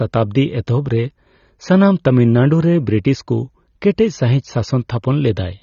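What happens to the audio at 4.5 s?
A low-bitrate AAC compression encode, likely AAC-LC at a rate around 24 kbps, affects the whole clip, including 4.5 s. The encoder discards everything above 7.1 kHz and coarsely quantises what remains, so the speech sounds dull and smeared, with a plainly audible warbling texture.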